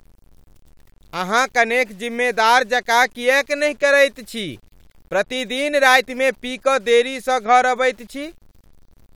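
Throughout the speech a grainy, gritty distortion rides on the sound, roughest in quiet passages and sputtering as the softest moments fall away, sitting roughly 40 dB below the signal. The likely cause is low bit depth without dither: samples truncated to about 9 bits.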